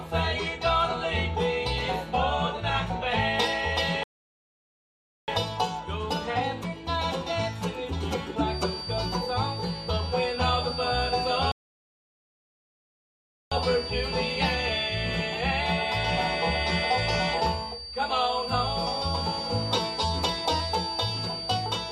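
Twice the player most likely ran dry of data or had its output thread blocked, producing a playback stall: the sound cuts out mid-flow from 4.03 to 5.28 s, a gap of about 1.25 s, and again from 11.52 to 13.52 s, a full 2.0 s, before resuming once the output recovers. These silences are plainly audible holes rather than brief clicks or dropouts. From 8.41 s to the end of the clip there is a feedback whistle, with the loudspeaker-to-microphone loop likely sitting just at the edge of oscillation. It doesn't run away into a howl. Instead it holds a thin tone at 4.6 kHz, roughly 10 dB below the main sound, swelling and fading slowly in level and persisting underneath the rest of the sound.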